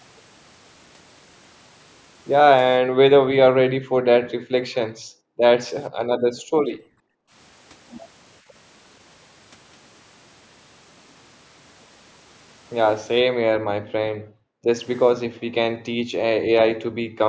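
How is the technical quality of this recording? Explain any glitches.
The recording has two kinds of glitch, both from the call's echo handling, and the bandwidth tops out at 8 kHz from the call microphone processing.

Background gated by the echo canceller: at 2.82–3.36, 3.56–4.02, 4.23–5.41, 5.95–6.00, 6.36–7.33, 14.12–14.67 and 15.23–17.19 s, the canceller clamps the mic while the far end plays, so the room tone drops about 40 dB, then snaps back.

Echo leak: around 13.87–13.92 s there's a brief scrap of delayed speech, roughly 473 ms late and about 30 dB down, likely residue the far end's canceller missed.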